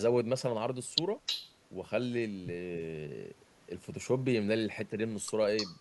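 Echo leak at 1.26 to 1.54 s and again from 5.57 s to the end of this speech clip: a copy of the speech returns 309 ms late and only about 5 dB quieter, likely because the far end's echo canceller let its loudspeaker's sound back through the microphone.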